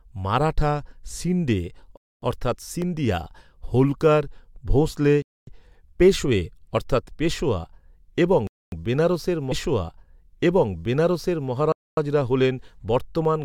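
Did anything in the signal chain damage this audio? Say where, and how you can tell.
Yes. The first fault, gap between chunks, sits at the playback or streaming stage. Holes of 250 ms open at 1.97, 5.22, 8.47 and 11.72 s, with 3 s of sound between them, so the audio is being delivered in 3 s chunks with silence left at each join. On a waveform these are flat silent stretches with square edges. On a spectrogram they are clean vertical blank bands at regular spacing, and no content is missing on either side.

The second fault, a repeated buffer, comes from the driver or buffer stage at 2.82 s. The device ran short of new samples and replayed its last block twice more. The repeated unit lasts about 1.45 ms, which fits a 64-sample buffer. A piece that small is heard as a brief click or buzz rather than a stutter. On a waveform it shows as a tiny identical cycle tiled three times with hard joins. 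On a spectrogram it appears as a thin broadband vertical line, with a few milliseconds of audio dropped.

The third fault, a stream segment repeated, is a network or playback queueing error. From 9.51 to 11.50 s, about 2 s of the programme plays a second time, so that stretch is heard twice. A small blip marks the jump back. Side by side on a waveform, the two copies have matching envelopes. A spectrogram shows the same formant pattern twice in a row, with a discontinuity at the seam.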